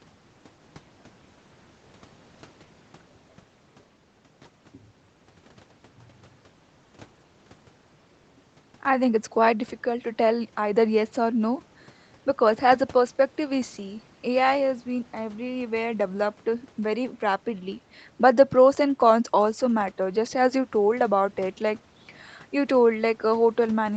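Nothing goes wrong in this speech clip; it sounds like an ordinary call recording, with the highs stopping at about 8 kHz as a call codec's bandwidth would, and no dropouts, glitches or other faults turn up anywhere.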